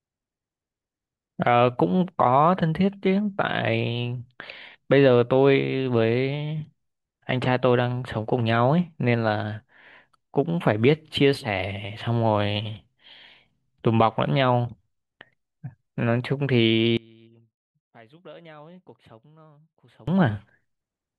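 From 16.97 s to 20.08 s the speech drops by about 27 dB and turns faint and distant, with its centre almost gone. The likely cause is one channel inverted: with one side's polarity reversed, the material common to both channels cancels when they are summed to mono, so the centred voice largely disappears and only the small difference between the two channels remains audible.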